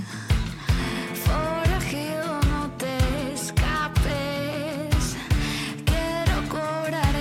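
No technical faults can be heard at any point in the clip.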